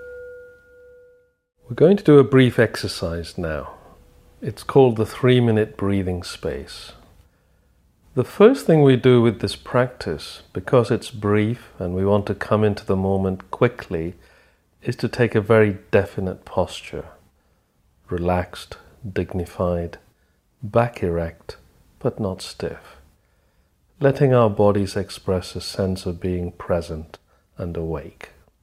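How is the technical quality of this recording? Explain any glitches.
No technical faults are audible.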